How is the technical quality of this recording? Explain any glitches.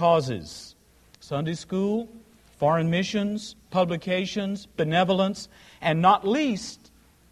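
Nothing glitches anywhere in the recording, so there's really nothing to flag on the technical side.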